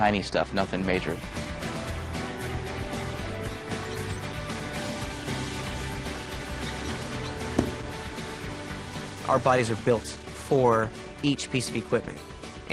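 The audio has two timing faults. At 6.41 to 6.43 s there is a skip ahead. About a second of material is missing, and playback jumps straight to later audio with no fill or silence, so the two sides of the cut are joined almost directly. The lost stretch was either dropped in transit or discarded when the jitter buffer overflowed while later packets were already queued. From 8.86 to 11.91 s there is a jitter buffer speed-up. The sound runs at about 114% of normal rate with its pitch unchanged and comes across as hurried. After the buffer had built up more delay than its target, the receiver removed many short pitch-period-length pieces in succession, trimming about 0.4 s in total to bring latency back down.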